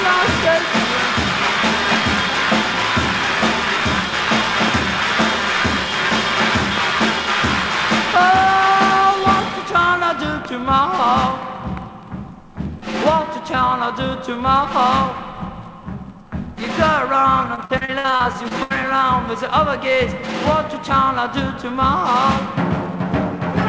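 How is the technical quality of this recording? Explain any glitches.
It's a call-style recording with three clear glitches: two pops early on and a robotic patch near the end. The audio stops at 8 kHz, which fits a wideband call codec like G.722.

Loud pop, 4.68–4.70 s: a sharp click about 10 dB above the sound, with the sound carrying on underneath. The likely cause is a brief voltage spike from a switch, static or a driver.

Loud pop, 6.78–6.80 s: likely the same kind of spike but harder, about 15 dB over the sound. It's a single sharp thump, and the sound runs straight through it.

Repeated packet loss (robotic sound), 17.55–18.72 s: around a dozen dropouts, the longest 74 ms, were patched by stretching the last bit of sound. About a third of that stretch is filler, so it comes out choppy with pieces missing.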